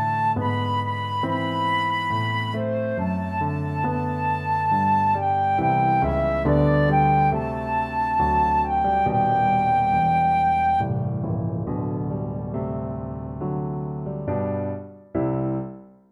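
Nothing stood out as a technical problem on listening to this recording.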